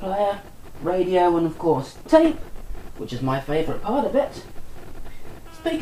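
Nothing in this audio stands out as a technical problem, so there's nothing here to point to at any moment.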